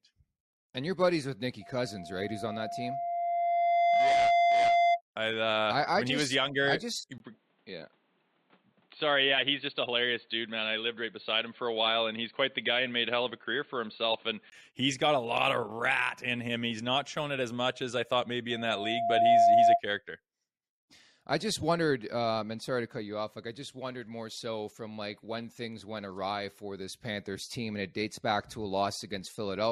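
From 1.61 to 5.01 s, a loudspeaker feedback squeal at 691 Hz swells over about two seconds to roughly 10 dB above the speech. Its single steady pitch that keeps growing sets it apart from constant hum or a fixed test tone.

After "was younger I just", a 20 ms gap at 7.18 s leads into sound with nothing above 4.4 kHz, a faint new background hiss and little change in level. This lasts until 14.52 s, just before "he's got a lot". The cause is likely an input switched to a poorer device: the sudden switch with a gap, rather than a gradual drift, and the different noise floor mark it apart from bandwidth-reducing compression.

After "much as I thought", the same 691 Hz feedback squeal returns at 18.50 s. This time it builds within about 0.7 s and stops at 19.81 s.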